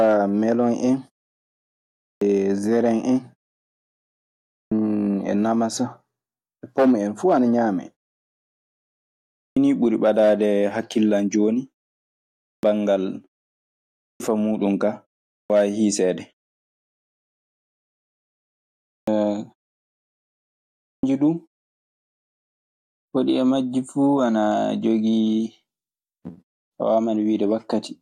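Speech resumes abruptly, its first sounds missing, at 2.06 s before "jeren en", 4.58, 9.41 before "nii ɓuri ɓadaade", 12.48, 14.06 before "muuɗun kaa", 15.36, 18.92 and 20.89 s. This clipped start after a pause costs 135 to 155 ms each time, because the output device, asleep through the silence, must wake before playing.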